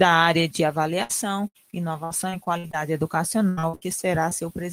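At 1.03 to 1.11 s there is a burst of packet loss. Roughly 60 ms of audio never arrived, and the receiver extended the preceding sound while fading it down, giving a held buzz or hiss. Playback then resumes slightly further on, with that segment missing.

From 1.47 to 2.75 s, repeated packet loss produces a robotic sound. Eight separate gaps, the longest about 73 ms, are each patched by continuing the last sound, covering about 22% of the stretch. The result is choppy audio with pieces dropped out. The same fault returns more densely from 3.49 to 3.83 s, with four gaps up to 81 ms long, so concealment fills about 65% of that span.

At 4.29 to 4.33 s, a short concealed packet loss removes about 20 ms. The decoder bridges it by extrapolating the preceding sound and blending back in, heard as a brief smear or wobble where a short sound may vanish.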